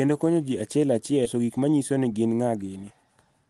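A speech clip with two playback faults, carried over a call path whose spectrogram shows content stopping near 12 kHz, consistent with Opus at around 32 kbps. Just after "konyo ji achiel", at 1.25 to 1.27 s, a skip ahead drops roughly 0.4 s of speech with no fill. The two sides are spliced almost directly, so the waveform shows an abrupt joint and the spectrogram a sudden discontinuity in formants and pitch harmonics. From 1.35 to 2.91 s, jitter buffer speed-up trims short pitch-period chunks repeatedly, removing about a fifth of a second in total. Speech runs at 111% with unchanged pitch and sounds hurried. Harmonic spacing stays constant on the spectrogram while syllables and gaps appear compressed in time.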